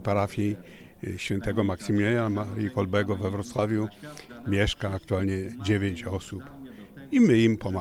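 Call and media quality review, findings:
Short concealed packet loss at 2.33–2.35 s, 3.56–3.59 s and 4.42 s: brief smear or wobble where the receiver's concealment extended the preceding sound across 10–20 ms gaps, then cross-faded back. No hard silence or click, unlike an unconcealed dropout.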